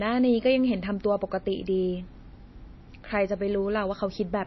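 The encoder has likely run short of bits throughout, consistent with MP3 compression at a low rate near 24 kbps. Treble is cut off above 5.8 kHz, dulling the speech, and weak frequency lines flicker between frames, giving a watery, swirly texture with smeared consonant attacks.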